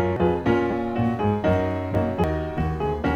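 You get two sorts of trouble in this short bit of audio. First there's damaged data in the compressed stream, at 0.16 s and again at 2.24 s. Each is a spot where some of the encoded bytes went bad. The decoder either misreads those frames or throws them out, loses its lock on the frame boundaries, and has to hunt for the next valid header before playback settles again. Then there are two repeated-buffer hiccups, where fresh audio didn't reach the device in time and it simply replayed the last chunk it had. At 0.71 s a 10 ms slice plays three times back to back, through about 0.73 s. At 1.95 s the same kind of 10 ms slice plays twice. Because each chunk is so short, you hear a brittle little buzz or click rather than a clear stutter, with a hard seam at every repeat. Nothing seems to go missing afterwards, though.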